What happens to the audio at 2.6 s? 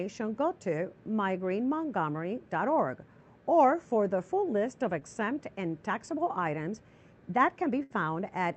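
Nothing goes wrong at 2.6 s: the audio passes through intact, with only the steady 8 kHz band limit of the Opus call path that runs throughout.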